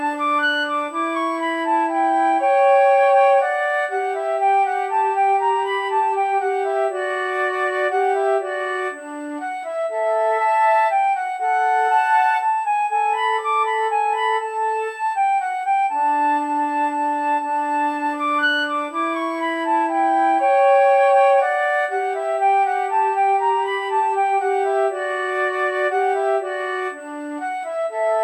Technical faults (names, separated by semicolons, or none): USB whine